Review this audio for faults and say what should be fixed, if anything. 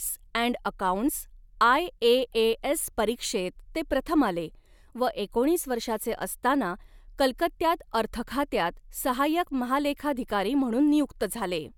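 Nothing to fix; no faults found in the speech.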